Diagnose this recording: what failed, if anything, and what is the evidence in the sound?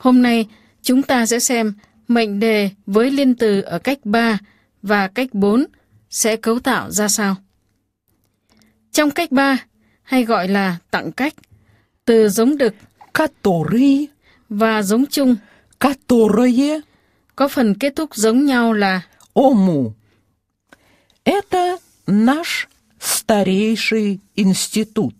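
The failure is in sample-rate conversion: a resampler restarted on every block. Throughout the recording a faint tick repeats four times per second, riding on the signal and absent where the sound drops away. The 44.1 kHz material was converted to 48 kHz in separate 250 ms blocks, so the filter at each block edge worked from missing or wrong neighbouring samples. That leaves a small discontinuity every quarter second, heard as the steady 4 Hz ticking.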